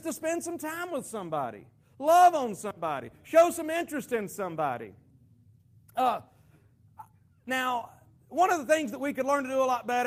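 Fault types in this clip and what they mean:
No technical faults can be heard in the recording: the signal stays continuous and steady, with no audible break, distortion or level disturbance at any point.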